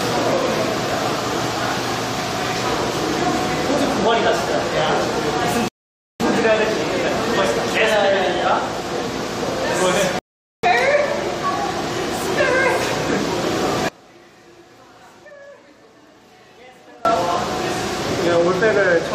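The audio has two rebuffering stalls, at 5.68 to 6.20 s and 10.19 to 10.63 s. Playback drops to dead silence, shown as a flat waveform and an empty spectrogram column, then resumes exactly where it stopped, adding about 0.52 s and 0.45 s. From 13.89 to 17.05 s the level falls by about 26 dB to a faint residue, visible as a sharply shrunken waveform, most likely because one channel is inverted and cancels on mono summing.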